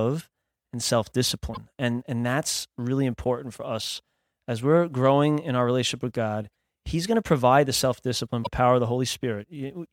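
Speech with three brief glitches, after "and self" at 1.53–1.57 s, at 6.52 s, and after "provide the self discipline" at 8.43–8.47 s. Each is a chirp-like noise burst or jump, likely a broken MP3 bit reservoir where frames about 26 ms long were lost. On the waveform each shows as a sudden discontinuity.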